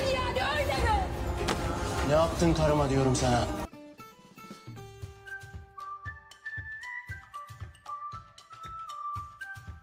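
No technical fault can be heard anywhere in this audio. Nothing in the recording or playback chain draws attention to itself at any point.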